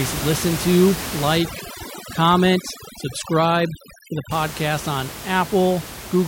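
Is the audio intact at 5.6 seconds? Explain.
Yes, the audio is intact at 5.6 seconds, with only the room's own background noise sitting about 11 dB below the speech, which is part of the recording rather than a fault.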